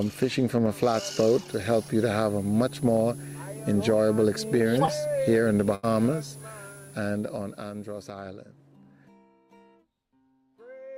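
A switching supply whistle runs from 1.48 s to 8.08 s: a thin, high tone at roughly 10 kHz, wandering between 9.88 and 10.18 kHz and sitting around 20 dB below the audio. That behaviour points to a switching power supply falling into an audible burst mode, or two supplies beating against each other, so the whine's pitch drifts with the changing load rather than holding still.

Short concealed packet loss follows at 4.85 to 4.89 s. About 20 ms of the stream failed to arrive in time, and the receiver patched roughly 17 ms of it by extending the sound just before the hole, then crossfading back into the real signal. The result is a brief smear or flutter, short enough that a quick transient could disappear without an obvious break.

A burst of packet loss appears at 5.75 to 5.85 s. About 80 ms went missing, a run of consecutive packets or one long one. The decoder filled roughly 79 ms of it by continuing the last sound and fading that continuation down. 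Depending on what preceded the gap, this is heard as a held buzz or a dying hiss, and the audio then resumes further on with that stretch gone.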